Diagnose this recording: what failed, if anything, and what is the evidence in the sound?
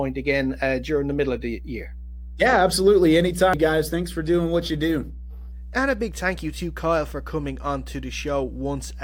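Mains hum is in the analogue wiring: a steady 60 Hz tone sits under the speech for the whole clip, roughly 15 dB down. A ground loop or nearby transformer is bleeding the power line into the signal path before conversion.

At 3.54 s there's a brief blip, the signature of damaged data in a compressed stream. That's a codec or storage problem: damaged data made the decoder misread a frame, lose sync and jump to the next valid header.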